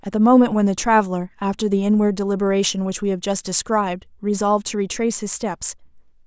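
No technical faults can be heard anywhere in this speech recording.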